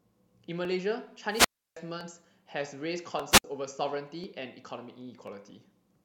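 A short speech recording with two wireless microphone squelch dropouts. At 1.29 s the radio link fades, hiss swells briefly, then the receiver's squelch shuts the output for about 321 ms before the voice returns by 1.78 s. The same thing happens again more briefly from 3.30 to 3.44 s, with a mute of roughly 64 ms. Both are the analogue FM signal falling below the squelch threshold, not a recording edit.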